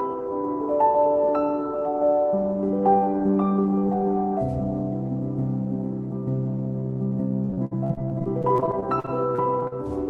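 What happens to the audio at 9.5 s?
At 9.5 s the audio sits inside a stretch of repeated packet loss (robotic sound) running from 7.45 to 9.73 s. Short dropouts, the longest about 60 ms, are each patched by extending the preceding sound, covering about 21% of the span and giving a choppy, robotic texture.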